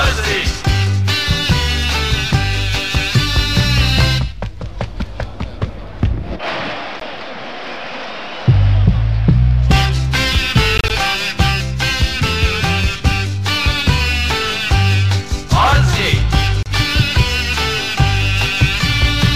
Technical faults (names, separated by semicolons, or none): Bluetooth dropout